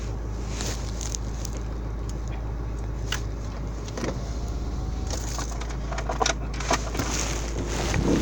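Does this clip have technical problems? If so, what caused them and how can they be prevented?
No, there is no technical problem to be heard in this clip. With nothing gone wrong, there is no cause to trace and nothing that needs preventing.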